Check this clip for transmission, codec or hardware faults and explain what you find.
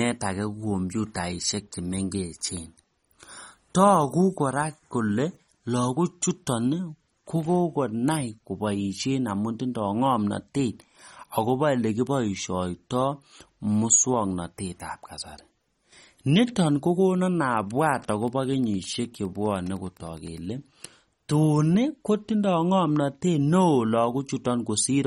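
Two faults are present: codec damage throughout the recording and a short burst of radio interference.

Across the whole clip the speech sounds watery and swirly, with smeared onsets and nothing above 15.6 kHz. This is likely MP3 compression at a low bitrate, around 32 kbps. Starved of bits, the encoder cuts the treble and lets weak spectral lines flicker between frames.

From 17.77 to 20.48 s a faint, steady ticking runs under the speech, roughly 35 dB below it, at a little under ten ticks per second. This is Wi-Fi interference. A nearby radio's beacon, repeating every 102.4 ms, is rectified by the audio circuitry and becomes an audible click train.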